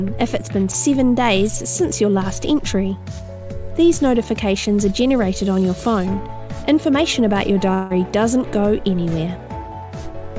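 Audio carried over a call path whose G.722 coding leaves nothing above 8 kHz. A long network dropout likely occurred from 7.74 to 7.92 s: about 160 ms is lost, replaced by a fading concealment buzz or hiss, then sound resumes.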